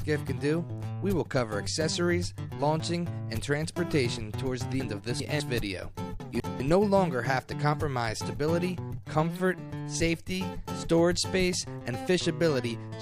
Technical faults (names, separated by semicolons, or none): chunks out of order